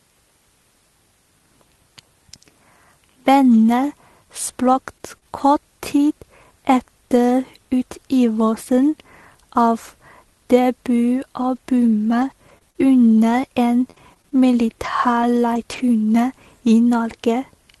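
At 4.73 s comes a lost packet rebuilt from error correction. A low-bitrate copy filled 20 ms of speech, so there is no gap, only a brief rougher, noisier patch.

Short concealed packet loss follows at 4.98 to 5.01 s and 5.18 to 5.23 s. The decoder extended the preceding sound over 20 ms and then 40 ms of missing audio, leaving small smears or wobbles.

Scattered short gaps run from 11.4 to 15.8 s. There are about seven gaps, the longest around 40 ms. Each was patched by continuing the last sound, heard as occasional ticks and hiccups.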